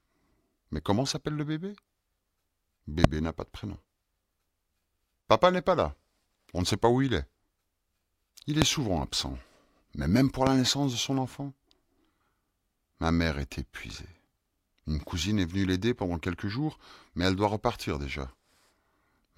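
Speech clip with a sharp, loud pop standing out well above the voice at 3.04–3.07 s, 8.62–8.64 s and 10.47–10.49 s, before "n'a pas de prénom", "souvent absent" and "naissance de son enfant"; each is a likely voltage spike from a switch, plug or static discharge.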